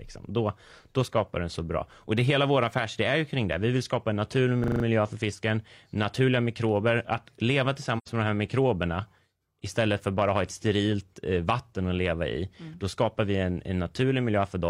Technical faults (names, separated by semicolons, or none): system hang loop; AAC frame loss with muting